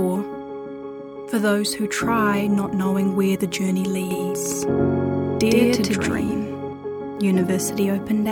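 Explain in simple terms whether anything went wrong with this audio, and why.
A doubled audio track from 4.11 to 6.73 s, likely from a second, slower recording path: an equally loud copy trails about a tenth of a second behind, like an echo.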